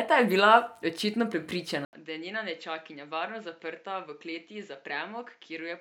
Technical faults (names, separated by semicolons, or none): input switched to a poorer device